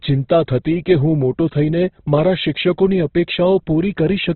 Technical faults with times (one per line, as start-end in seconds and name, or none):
0.00-4.35 Opus compression